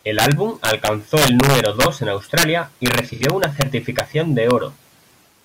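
Violent, snapping cracks run through the loud parts of the speech from 0.19 to 1.86 s, again at 2.38 to 2.43 s and 2.86 to 3.62 s, with brief cracks at 3.99 s and 4.51 s. This is integer overflow: peaks driven roughly 0 to 5 dB past the top of the integer range wrap to the opposite sign instead of being limited, so each one jumps across the full scale. The result is far harsher than clipping.

Inside the overflow stretch, 3.12 to 3.23 s has a smeared, noisy, phasey patch. This is AAC frame loss with concealment. About 85 ms of data went missing, which fits two lost frames, and the decoder filled the gap by reusing the last good spectrum.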